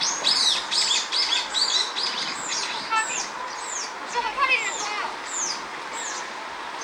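No technical faults are audible.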